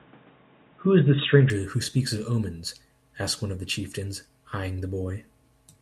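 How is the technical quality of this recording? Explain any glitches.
The recording has one glitch at the start. From 0.0 to 1.5 s the speech is dull and boxy with nothing above 3.8 kHz, then it abruptly clears with no gap. The likely cause is the input switching to a poorer device. Unlike a simple filter, the level also jumps by about 5 dB and the background hiss changes.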